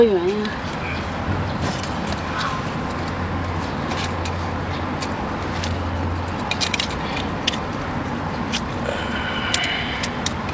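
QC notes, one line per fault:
No faults found.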